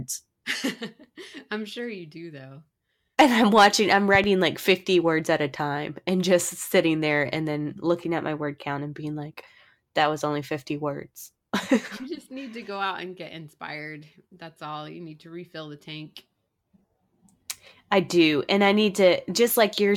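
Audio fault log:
4.15–4.26 s, loud pop: two sharp pops land just after "I'm watching I'm", around 10 dB above the speech. A sudden voltage spike from a plug, switch or static is the likely cause.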